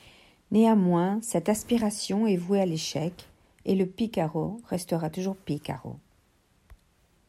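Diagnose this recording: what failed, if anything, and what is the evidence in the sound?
Nothing in the signal chain has failed, and no stage between capture and playback leaves an audible trace on the speech.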